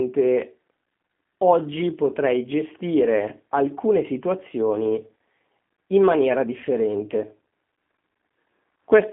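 Throughout, G.729 codec damage is plainly audible: the band sits at 150 Hz to 3.6 kHz with nothing above 3.8 kHz, and the speech sounds rough and synthetic, consistent with 8 kbit/s coding.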